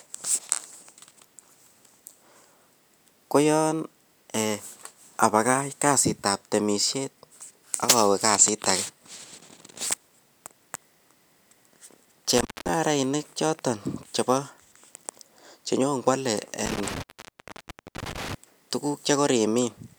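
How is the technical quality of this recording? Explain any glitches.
The recording has two dropouts from an intermittent contact. At 12.38 to 12.69 s, and again at 16.66 to 18.34 s, a loose connection opens for about 0.21 s and then 0.96 s. The speech cuts out with crackle at each edge. The waveform collapses to near-flat, and the spectrogram shows broadband clicks bracketing an empty gap.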